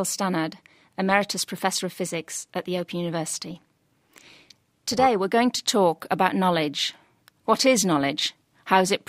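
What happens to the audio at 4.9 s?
At 4.9 s the speech is inside a stretch of overlap-add ripple running from 3.50 to 5.07 s. It was reassembled from windowed frames whose overlaps don't sum to a steady gain, so the level dips and swells by about 6 dB once per frame, around 300 times a second, giving a metallic buzz with extra tones around the voice.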